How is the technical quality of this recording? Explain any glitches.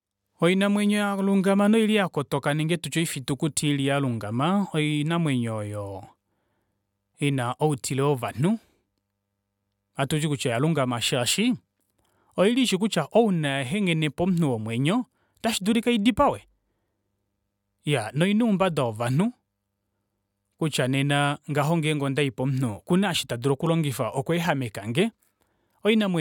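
No technical faults are audible.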